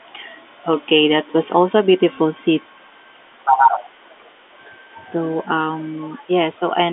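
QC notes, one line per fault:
2.16 s: packet loss with pitch repetition. One 10 ms packet went missing, and the receiver bridged it by repeating the last pitch period. A gap this short leaves only a brief, slightly held buzz in the speech before normal sound resumes.
3.44–3.79 s: other side's voice leaking through. A second voice comes through at roughly the same level as the talker, most likely loudspeaker sound that the echo canceller failed to remove from the microphone. It sits audibly alongside the main speech for this stretch.
3.52–4.06 s and 4.38–4.59 s: speech suppressed in double talk. The talker's level dips by up to about 20 dB and then about 25 dB, together roughly 0.7 s. This is likely the echo canceller turning everything down while both sides spoke at once, so the voice dips.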